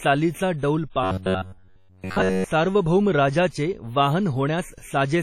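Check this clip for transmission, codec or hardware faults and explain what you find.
Two problems here: a baked-in low-bitrate encode running through the whole clip, and a stretch of robotic buzz early on.

Low-bitrate audio saved at a high bitrate, throughout: this is likely an old low-bitrate encode, something like a WMA file at around 32 kbit/s, that was later re-saved as a higher-bitrate MP3. The bigger second file can't bring back what the first encode threw away, so its artefacts stay put. Nothing in the recording gets above 17.2 kHz.

Robotic sound from repeated short buffers, 1.04 to 2.44 s: here the speech turns into a stiff, metallic drone. The likely cause is new audio arriving too late, so the playback side keeps looping the last tiny chunk while real material gets skipped. Essentially all of that stretch is repeats, locking the sound to a steady buzz at 93.8 Hz. That fits a buffer of roughly 10.7 ms. 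The speech still rises and falls under it, loosely.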